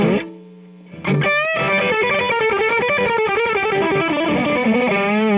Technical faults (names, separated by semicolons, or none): none